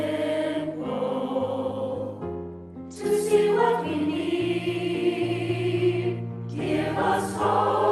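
No technical faults are audible anywhere in the audio.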